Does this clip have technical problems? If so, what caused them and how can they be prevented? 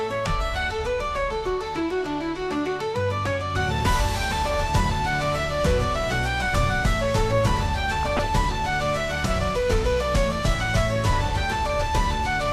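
Yes. Throughout the clip the sound is dull and carries a gurgling, granular roughness, with upper frequencies flickering in and out as whole bands are dropped and those left are coarsely quantised. That pattern points to MP2 compression, likely at a low rate that fits around 80 kbps, where Layer II runs out of bits for its upper sub-bands. Unlike burbling from bit errors, this damage is steady rather than confined to a burst. Using a higher bitrate or a more efficient codec prevents it.

From 7.89 to 8.28 s there is a separate burst of noise blips and level jumps in single sub-bands: DAB burbling. Here weak reception let bit errors, at an error rate of a fraction of a percent, slip past error correction into the MP2 data, so corrupted samples put short blips of noise in single sub-bands and corrupted scale factors make sub-bands jump in level for up to a frame. The span fits roughly 17 damaged frames. 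It differs from the compression dullness because it is sudden and localised, not continuous. Better antenna placement or a stronger signal prevents it.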